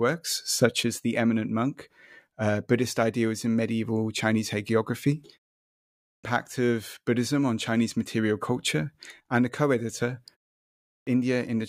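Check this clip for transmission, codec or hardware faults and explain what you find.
Two faults of one kind turn up, both a clipped start after a pause. At 5.97 to 6.24 s, following a silence of 0.67 s, speech bursts in abruptly with its opening sounds missing, about 0.27 s gone. At 10.78 to 11.07 s, right after "and a co editor" and a 0.5 s pause, the same thing happens, losing about 0.29 s. The output device drops into a sleep state during silence and needs that time to wake and lock again, so the onset is swallowed.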